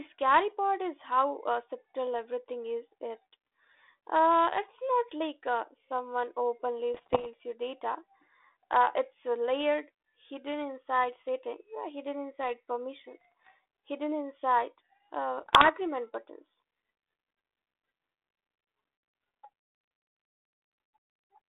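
Bit errors on an ADPCM link crackle through the speech at 6.94 to 7.26 s, 13.21 to 13.5 s and 15.38 to 15.69 s. Each flipped bit throws off the decoder's step size and prediction, so you get pops and rough, jumpy bursts.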